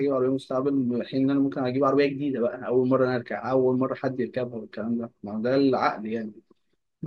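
Speech with no audible faults.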